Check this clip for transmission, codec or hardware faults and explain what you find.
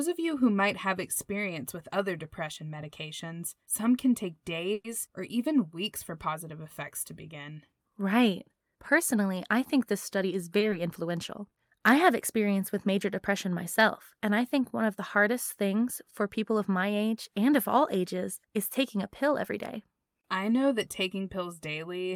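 Three transmission faults are audible in this speech clip, all of them jitter-buffer or packet-delivery problems rather than codec or hardware faults.

From 4.73 to 4.86 s there is a call audio freeze. The last sound is carried on as a fading buzz or hiss for about 110 ms, then the speech resumes exactly where it left off, with nothing skipped. That pattern points to packets being held up in transit, which likely emptied the jitter buffer. Because nothing was discarded, the stream now runs about 110 ms later than before.

At 10.59 to 10.63 s a short stall from a late packet appears. The sound at that moment is held for about 20 ms too long, with a faint buzzy dip, before continuing from the same point. The packet arrived after its playout time, so the receiver stretched the previous audio while waiting. No speech is lost, but the delay grows by another 20 ms.

Shortly after, at 10.71 to 10.74 s, there is short concealed packet loss. 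About 20 ms of audio never reached the decoder, and the receiver patched the gap with roughly 10 ms of synthesised continuation before crossfading back into real audio. It is heard as a brief smear or wobble.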